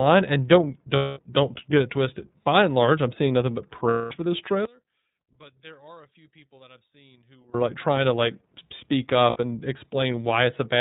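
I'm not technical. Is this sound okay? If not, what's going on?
No. The recording has three kinds of problems.

First, the whole clip passed through the iLBC codec, a low-quality phone-call format. It throws away everything above 4 kHz, so the speech sounds muffled and boxy. The voice also has a slightly rough, synthetic edge. The format works in 30 ms chunks, and at this setting the damage is plainly audible from start to finish.

Second, there are lost iLBC frames. Chunks of the call went missing, and the decoder filled each gap by repeating the last bit of voice with some noise mixed in. That makes a short, buzzy held sound where the speech should be. It happens from 0.96 to 1.19 s, between "and don't" and "don't get it twisted". It happens again from 3.89 to 4.12 s, after "I'm seeing nothing but" and before "for this". Each of those gaps lasts about 210 ms. A shorter one of 60 ms comes at 9.30 s, right after "trying to like speak". 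The voice recovers almost at once each time.

Third, from 4.65 to 7.54 s the voice suddenly drops almost to nothing and turns faint. The likely cause is one channel inverted. One side of the stereo signal was flipped upside down. When the two sides are mixed together, the voice in the middle cancels itself out.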